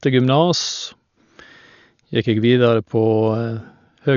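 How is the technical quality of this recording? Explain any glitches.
Poor, because of heavy codec damage across the whole speech recording, most likely from Dolby Digital compression at a rate that fits about 48 kbps. Starved of bits, the encoder cut everything above 6.9 kHz and left many frequency lines for dither noise, so the speech sounds dull, with rough, fluttering noise around its tones.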